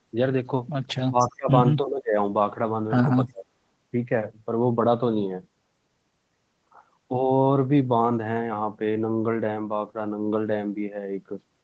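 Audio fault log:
1.04 to 1.51 s, 1.79 to 2.18 s, 3.25 to 3.46 s: speech suppressed in double talk. The echo canceller likely mistook near speech for echo during overlap, dropping it about 25 to 35 dB in brief gaps.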